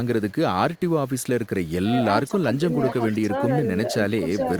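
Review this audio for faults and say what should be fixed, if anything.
Low bit depth without dither runs throughout the speech. Quiet passages turn gritty, with error about 35 dB below the signal, which fits 8-bit rounding, likely without dither. Unlike steady hiss, the grain follows the signal. Render at higher bit depth, or add dither before reducing it.

Echo leak appears as faint scraps at 0.76–0.80 s and 1.65–1.71 s, each repeating speech from 404 ms earlier at about 35–40 dB down. The likely cause is a far-end echo canceller that let loudspeaker pickup through. Room reverb would smear continuously rather than return as a distinct delayed copy. Better echo cancellation or headset use at the far end would prevent it.

Speech suppressed in double talk dips the speech by up to about 10 dB within 2.27–2.62 s and 3.10–3.49 s, likely from an echo canceller ducking while both sides spoke. 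These are brief level drops, not dropouts from packet loss. Tuning the canceller's double-talk detection would prevent it.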